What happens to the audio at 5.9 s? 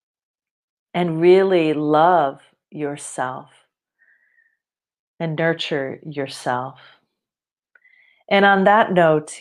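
Nothing goes wrong at 5.9 s; the speech plays through that moment intact, with no dropout, click, glitch or other fault.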